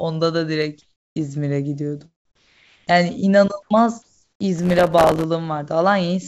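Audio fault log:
0.82–1.16 s, 2.25–2.87 s, 3.62–3.70 s: comfort noise in place of the background; pauses become steady featureless hiss, about 2, 4 and 12 dB quieter, likely from discontinuous transmission.
4.59–5.24 s: processor overload crackle; roughly 70 missed deadlines on tiny buffers, fitting a 3 ms buffer, repeat stale audio with hard edges, giving gritty tearing.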